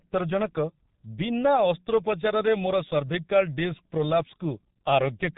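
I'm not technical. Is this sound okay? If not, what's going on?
No. The speech sounds muffled and hoarse throughout, with smeared consonants, because the G.723.1 codec, an old internet-phone format, squeezes it hard and drops all the higher sounds.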